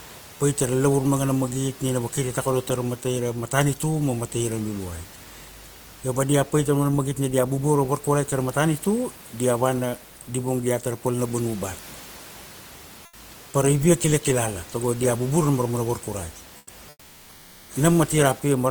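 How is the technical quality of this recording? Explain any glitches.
Three short pauses lose their real background, which the room noise, about 26 dB below the speech, otherwise fills. Comfort noise in place of the background appears at 13.05–13.13 s, 16.57–16.67 s and 16.89–17.69 s. The likely cause is discontinuous transmission, consistent with Opus DTX, where the sender goes quiet and the receiver substitutes synthetic noise. Each gap becomes a flat, featureless hiss about 4–6 dB quieter.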